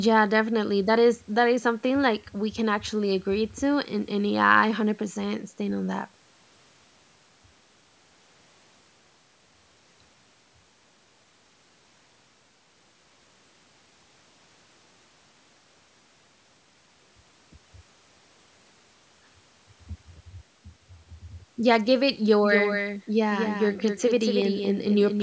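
A speech recording in which, from 22.43 s to the end, the audio was likely captured a second time through a slower path and mixed back in, producing a doubled audio track. A full-band copy trails the original by roughly a fifth of a second, somewhat quieter, around 5 dB down. It begins abruptly, with no decay or room colour, so every syllable gets a dry, distinct repeat through the close. The call microphone processing limits content to 8 kHz.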